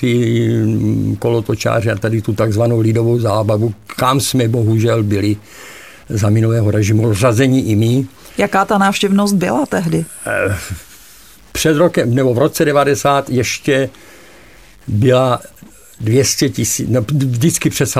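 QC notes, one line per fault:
throughout, stuck bit: a harsh, buzzy distortion rides on the speech, and the pauses never go quiet, filling instead with a steady noise floor. The likely cause is one data bit held fixed, knocking about half the samples off by a step of around -40 dBFS.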